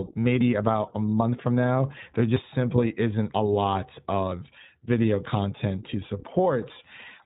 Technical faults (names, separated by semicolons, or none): iLBC codec; lost iLBC frames